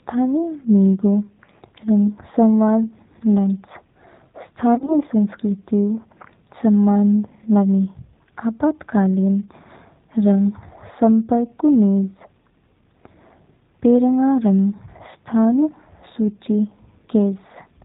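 The whole recording passes through the G.729 codec, at 8 kbit/s. The speech is rebuilt from a vocal tract filter and a few pulses per frame. Nothing above 4 kHz survives. The result sounds plainly rough, thin and synthetic throughout.

From 4.75 to 4.95 s, VoIP packet loss concealed by the speech codec breaks in. About 60 ms of audio goes missing in scattered gaps over roughly 120 ms, the longest 30 ms. The decoder stretches its last pitch and filter into a fading buzzy tone or coloured noise. The speech stays weakened briefly afterward.

A second, shorter loss hits from 14.77 to 14.83 s, with about 30 ms missing. The same concealment fills the gap with a brief buzzy or noisy tail, then recovers over the following frames.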